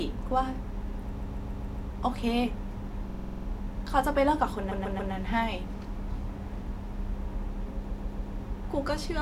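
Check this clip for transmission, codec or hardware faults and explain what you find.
The clip has repeated frames, a stutter at four points: 1.17–1.87 s, 3.09–3.46 s, 4.70–5.12 s and 7.90–8.32 s. A short block of coded speech, about 139 ms (46 ms at 3.09 s), replays several times, adding up to 1.9 s.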